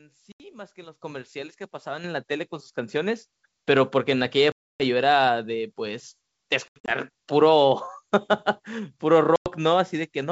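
At 0.32 to 0.41 s, packet loss on an ADPCM call cuts 80 ms of speech to hard-edged silence. The decoder's adaptive predictor and step size no longer match the sender's, so the speech returns with brief, slight distortion before settling. On a spectrogram this shows as a blank vertical gap.

At 1.02 s the microphone volume is stepped up by about 10 dB, and at 2.04 s by about 7 dB. Each time, the software raised the input level in one jump, so voice and background get louder together. The waveform envelope widens abruptly at both points.

The same dropout pattern returns at 4.52 to 4.82 s, where 280 ms is lost. Between 6.68 and 6.91 s, 140 ms is lost in scattered gaps, the longest 80 ms. A final 100 ms gap falls at 9.36 to 9.50 s. The G.722 wideband coding keeps content up to about 7 kHz throughout.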